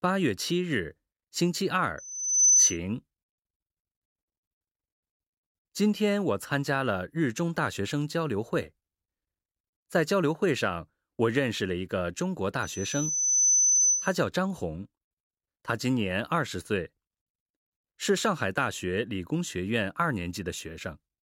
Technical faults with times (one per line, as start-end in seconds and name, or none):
1.98-2.77 loudspeaker feedback squeal
12.62-14.16 loudspeaker feedback squeal